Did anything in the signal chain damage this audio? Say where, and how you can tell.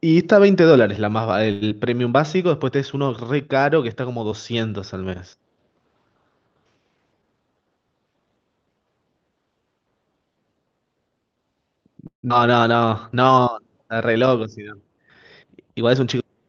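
Yes. The damage sits in the network and jitter-buffer stage of a call path; the codec stage band-limits the speech at 8 kHz.

At 1.51 to 1.63 s there is a short stall from a late packet. The receiver's buffer ran dry, so the last sound is held for about 100 ms before playback resumes at the same point. Nothing is lost, but that sound is drawn out with a slight buzz or dip.

Right after, at 1.69 to 1.72 s, comes a short concealed packet loss. Roughly 40 ms never arrived in time. The decoder patched the gap by extending the preceding sound and crossfading back, heard as a brief smear or wobble.

Jitter buffer slow-down occurs at 1.75 to 1.96 s (87% speed, 36 ms added), 12.76 to 13.54 s (89%, 91 ms added) and 13.94 to 14.19 s (89%, 35 ms added). Repeated pitch periods stretch the speech without changing its pitch, rebuilding buffer reserve.

Jitter buffer speed-up runs at 6.97 to 7.77 s (113% speed, about 100 ms removed) and 15.53 to 16.16 s (105%, about 40 ms removed). 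The receiver drops short pitch-period slices to shed excess delay, so the speech sounds hurried at unchanged pitch.

From 12.07 to 12.32 s the speech gives way to a synthetic buzz or hiss that decays, then about 120 ms of silence. It resumes with about 120 ms of content missing. This is likely a long network dropout, with packet-loss concealment filling the gap until real audio returned.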